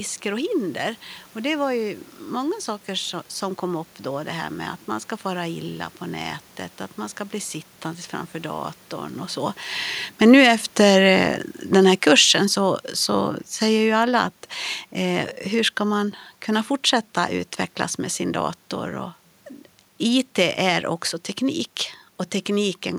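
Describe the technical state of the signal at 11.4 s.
At 11.4 s the signal is in the middle of an automatic gain falling event that runs from 10.06 to 14.34 s. The automatic gain control has judged the input too loud, or its background noise too strong, and is pulling its gain down, by about 7 dB over that span. The level sinks smoothly rather than abruptly, and the room noise underneath drops along with the speech, which sets this apart from a talker simply moving away.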